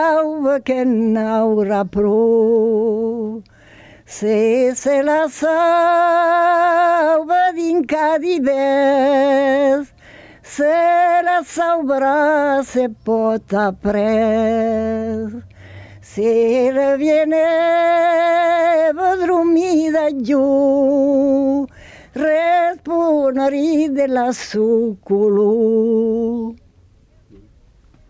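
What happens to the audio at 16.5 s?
Around 16.5 s you're hearing the gain pumping that runs through the whole clip. The gain ducks by around 10 dB under each loud sound, so everything feels squashed and breathing. The likely cause is gain set far too hot, with a fast limiter clamping down on every peak.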